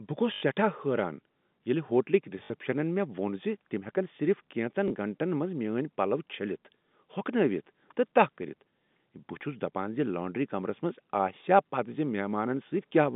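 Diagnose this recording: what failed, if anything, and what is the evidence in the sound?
The network stage dropped packets, and the receiver concealed each gap by replaying the last packet that arrived until fresh audio resumed: packet loss with last packet repeated. It happens three times, at 0.34–0.42 s (80 ms), 2.44–2.50 s (60 ms) and 4.88–4.90 s (20 ms), which fits runs of four, three and one 20 ms packets. Because the repeats ignore the pitch period, the longer runs buzz at about 50 Hz, giving a brief robotic stutter over the 3.6 kHz telephone band of the G.711 line.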